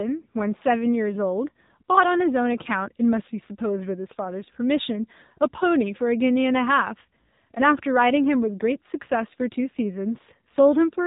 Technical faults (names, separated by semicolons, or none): AMR narrowband mobile codec